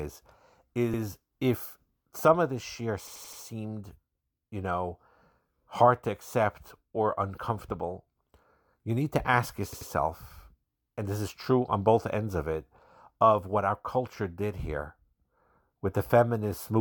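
Repeated buffer stutters occur at 0.94 to 1.02 s, 3.07 to 3.41 s and 9.73 to 9.90 s. Late audio made the device replay its last 85 ms block, which fits a 4096-sample buffer. The block sounds twice, then five times, then three times. Each repeat has a hard join.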